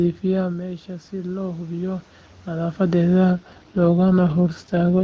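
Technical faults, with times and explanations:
3.33 s to the end, AMR rate drop: the wideband coding falls from 23.85 to 8.85 kbit/s, so far fewer bits describe each frame and the speech turns rough and synthetic. The band stays just as wide and nothing cuts out, unlike a bandwidth switch or dropout.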